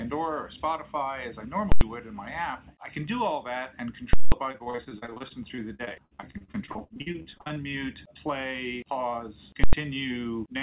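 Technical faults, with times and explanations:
1.72–1.81 s, 4.13–4.32 s and 9.64–9.73 s, invalid numbers at full scale: a calculation produced infinite or undefined values that were forced to the largest positive or negative value for a whole processing block. The output locks at one extreme, far beyond the audio's peaks, for about 93 ms, then 186 ms, then 93 ms, which fits blocks of 4096 and 8192 samples. Each event is heard as a very loud pop or bang with no sound from the block itself.
4.52–7.58 s, repeated packet loss (robotic sound): packets kept arriving too late or not at all across this stretch. The receiver filled each hole by extending the last sound it had, with the longest hole about 59 ms and roughly a third of the span made up this way. The result is choppy, robotic audio with pieces missing. Across the whole clip the G.711 mu-law call path also leaves nothing above 4 kHz.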